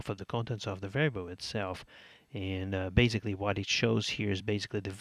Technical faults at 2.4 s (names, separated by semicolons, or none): none